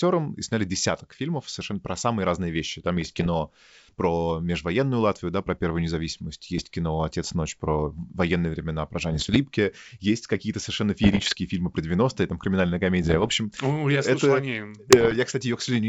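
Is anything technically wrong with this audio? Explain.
Yes. Rough crackling bursts with pops and brief level jumps occur at 2.97–3.29, 6.58–6.67, 9.11–9.37, 11.03–11.35, 13.02–13.31 and 14.89–15.17 s. These are bit errors on an ADPCM link, around one percent, on a G.722 wideband path. Each flipped bit throws off the decoder's step size and predictor, so the damage rings on briefly.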